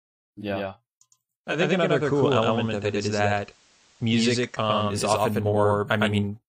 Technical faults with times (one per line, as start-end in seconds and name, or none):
0.00-6.49 doubled audio track
1.44-4.97 digital radio blending to analogue